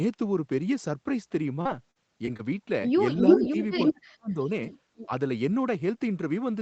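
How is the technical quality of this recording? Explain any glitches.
The recording has three kinds of glitches: a choppy patch early on, then a cluster of echo and ducking problems in the middle. Audio tops out around 8 kHz throughout, which fits a wideband call codec at a modest bitrate.

Repeated packet loss (robotic sound) runs from 1.61 to 2.41 s. Four short holes, the longest 44 ms, were bridged by extending the preceding sound, and about 14% of that stretch is stitched-in filler. Because the repairs come in quick succession, the speech turns choppy, with small pieces missing rather than one clean dropout.

An echo leak appears at 3.17 to 3.50 s, 3.76 to 3.92 s, 4.44 to 4.49 s and 4.96 to 5.06 s. It is likely a loudspeaker on the far side feeding back past an echo canceller that didn't fully remove it. A copy of the speech returns about 345 ms late. It is strong at first, louder than the talker, then weaker, and well below the talker in the last two scraps.

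Speech suppressed in double talk occurs at 3.36 to 3.55 s, 3.91 to 4.49 s and 5.06 to 5.10 s. With both sides active, the canceller likely couldn't separate the talker from the returning echo and pulled everything down. The first dip is moderate, roughly 15 dB. The second nearly silences the speech for about 0.4 s. The last is a slight, brief duck.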